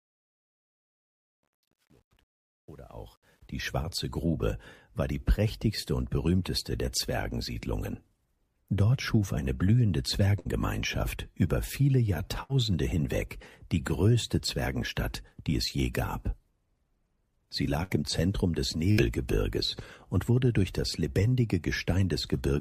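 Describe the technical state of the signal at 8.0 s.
At 8.0 s the signal is intact, with no audible fault at that moment.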